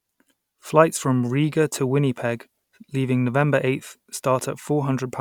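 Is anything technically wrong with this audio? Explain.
No, nothing technically wrong stands out anywhere in this speech recording.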